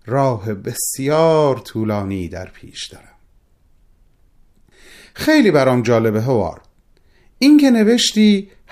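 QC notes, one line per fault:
0.11–8.72 s, clock slip clicks: faint, evenly spaced ticks roughly every 70 ms, around 150 in all, merging into a light rattle under the speech. These likely come from two unsynchronised clocks drifting about 300 ppm apart, with each slip dropping or repeating a single sample.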